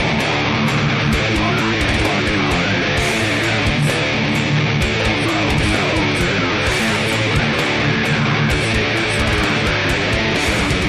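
No technical faults can be heard anywhere in this clip.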